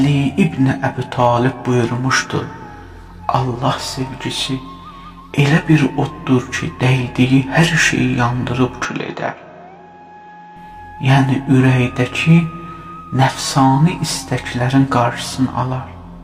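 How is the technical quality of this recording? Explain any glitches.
There is one noticeable glitch. From 8.85 to 10.56 s the sound turns duller and roughly 5 dB quieter, with nothing above 7.3 kHz and a faint new hiss, and no gap at the change. This is likely an input switched to a poorer device with a narrower band. A spectrogram would show the upper band cut off flat, and the waveform would show a slightly lower envelope.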